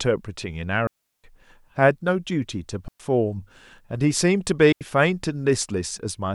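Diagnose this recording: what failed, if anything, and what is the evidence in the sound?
The digital wireless link between microphone and receiver failed three times, causing a digital wireless dropout each time. Once too much data is lost, the receiver mutes the speech with a very fast fade and then resumes. The result is a clean hole of near silence with no noise burst on either side: 0.87 to 1.24 s (about 368 ms), 2.88 to 3.00 s (about 115 ms), and 4.72 to 4.81 s (about 88 ms).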